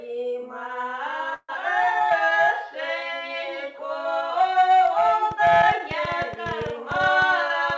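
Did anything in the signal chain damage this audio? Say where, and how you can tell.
Yes. From 1.34 to 1.57 s the sound stops and is replaced by a fading buzzy continuation lasting about 208 ms, with roughly 30 ms of silence. About 100 ms is lost, not delayed. This is a long network dropout, likely packet loss, rather than a brief gap.

A jitter buffer slow-down runs from 1.85 to 2.73 s. Repeated pitch periods and pause fragments add 75 ms, so playback runs at 92% speed at unchanged pitch. That rules out a clock or resampling fault, which would shift pitch. It follows the dropout, consistent with the buffer raising its delay by around 50 ms.

A train of clicks runs from 5.31 s to the end. Similar-shaped pulses arrive about 9.5 times a second, irregularly spaced, peaking about 10 dB above the sound and audible in pauses too. They sit on top of intact audio, so this is not packet loss. The likely cause is electrical interference or a struggling interface on the analogue or converter side, not the G.722 call path, which limits everything to 8 kHz.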